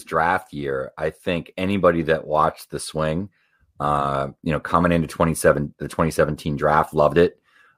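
Nothing in the speech recording points to a technical fault anywhere in the signal.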